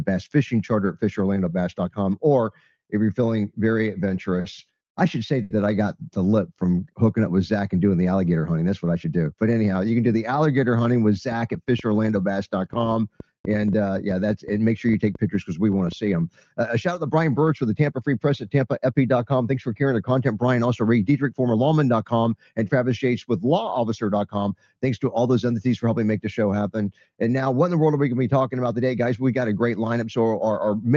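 The audio has passed through a call path whose Opus coding noise and 8 kHz upper band limit point to a modest bitrate around 32 kbps. Between 4.40 and 5.52 s it shows repeated stalls (stutter): three times the jitter buffer ran dry and the receiver stretched the last sound, 160 ms in all with the longest hold 80 ms, so it drags without losing material. A jitter buffer slow-down from 6.31 to 6.82 s repeats pitch periods to rebuild the buffer, playing at 88% speed and adding 67 ms at unchanged pitch. Jitter buffer speed-ups at 8.94 to 9.33 s (112%, about 50 ms removed), 21.33 to 21.55 s (113%, about 40 ms) and 24.43 to 25.16 s (104%, about 40 ms) trim pitch periods to shed excess delay, so the first two stretches sound briefly hurried. From 11.32 to 15.93 s a train of clicks, about thirty at an irregular average of 5.65 per second and peaking roughly 5 dB above the signal, ticks over both sound and pauses, likely from electrical interference or a faulty connection or power supply.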